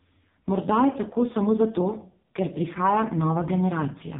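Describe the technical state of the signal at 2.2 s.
At 2.2 s, as throughout the clip, AMR narrowband mobile codec damage: nothing above 3.8 kHz, and heavily buzzy, synthetic speech, which fits a very low bitrate near 5 kbps.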